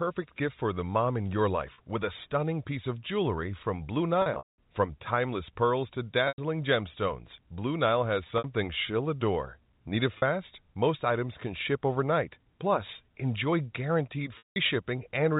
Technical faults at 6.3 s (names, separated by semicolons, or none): packet loss with pitch repetition